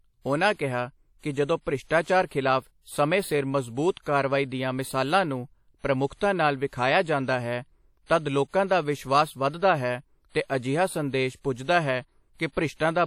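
All the way through, the speech carries plainly audible WMA compression damage, likely from an encoder running at something like 48 kbps. Its long transform blocks smear quantisation noise around each syllable, giving a ringing, washy edge and a hiss that breathes with the voice, and nothing survives above 17 kHz.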